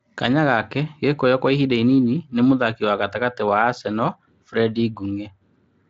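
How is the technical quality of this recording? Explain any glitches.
The recording has one real problem, and it runs almost the whole length. From about 0.33 s to the end there's a wrongly applied de-emphasis, a treble cut meant to undo a pre-emphasis boost that was either never there or had already been undone. The speech gets a smooth downward tilt, about 14 dB lower at 10 kHz than at 1 kHz, so it sounds dull and muffled, like it's behind a blanket. The Speex coding underneath is only lightly marked, and its band stops near 7.6 kHz.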